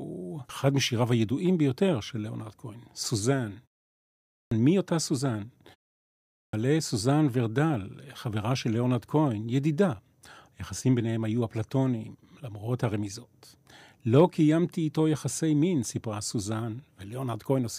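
At 4.15 s, after a 0.56 s pause, and again at 6.10 s, after 0.43 s, a clipped start after a pause cuts about 0.36 s and 0.43 s from the onset before "מי אותה סוזן" and "סוזן ורדל חברה של". The sleeping output only wakes mid-sound. On a waveform, flat silence jumps straight to speech level; a spectrogram shows hard vertical edges.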